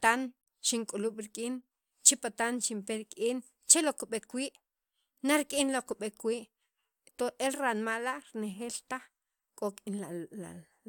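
No technical faults can be heard anywhere in the speech.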